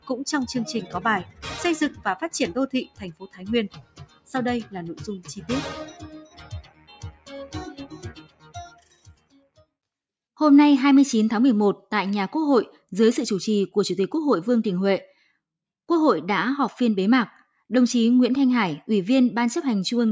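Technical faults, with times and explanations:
Throughout: noise suppressor applied to music or sounds. A speech-tuned suppressor treats steady tones and decay as noise. Level swings by about 10 dB as attacks pass and held parts sink. The sound pumps and thins. Call processing leaves nothing above 8 kHz.
1.24 to 9.64 s: sound cut by the noise suppressor, at 1.24–1.47, 1.9–2.06, 2.84–3.43, 3.69–4.32, 5.88–7.31 and 7.79–9.64 s. Sustained passages drop by about 13 to 18 dB. The suppressor judged them noise and pulled them down.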